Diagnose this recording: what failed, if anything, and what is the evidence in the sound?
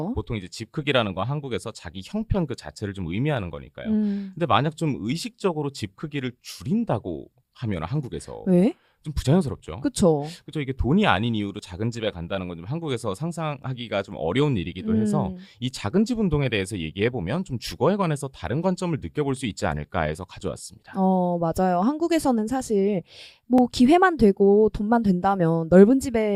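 Overlap between stream segments at the streaming stage, heard as tiny skips at 11.59 and 23.58 s, where trimmed audio leaves a waveform step and a thin vertical spectrogram line.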